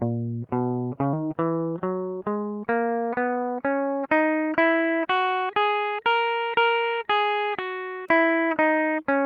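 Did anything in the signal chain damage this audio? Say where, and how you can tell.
Yes. A skip ahead at the network or jitter buffer, from 1.13 to 1.15 s: about 0.7 s of music is missing and the two sides are joined with no gap. The waveform shows an abrupt splice, and the spectrogram shows harmonic content changing discontinuously at that point.

A jitter buffer speed-up follows from 1.23 to 3.87 s. The music runs at 112% tempo with unchanged pitch. Short pitch-period segments were cut repeatedly, about a third of a second in total, to shed the excess delay. The beat spacing on the waveform shrinks while spectrogram harmonic frequencies stay fixed.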